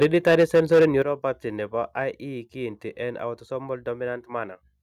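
From 0.01 to 0.86 s the opening speech has a harsh, crackling edge with flattened peaks, likely microphone overload, driven about 7 dB past the converter's limit, clipping roughly a tenth of samples. At 0.03 s and again at 1.02 s the level drops abruptly, by about 3 dB then about 8 dB, likely the microphone volume stepped down by software reacting to the distortion.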